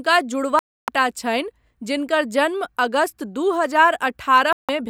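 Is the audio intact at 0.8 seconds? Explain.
No, a digital broadcast dropout mutes the speech from 0.59 to 0.89 s: the receiver lost valid frames and stayed silent until clean ones returned before "छनि जिनकर जन्म".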